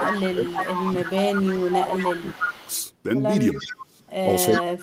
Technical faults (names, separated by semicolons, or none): speech suppressed in double talk; echo leak